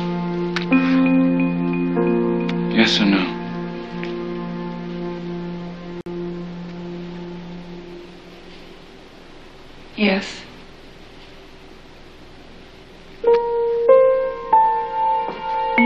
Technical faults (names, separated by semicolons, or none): gap at a join of encoded pieces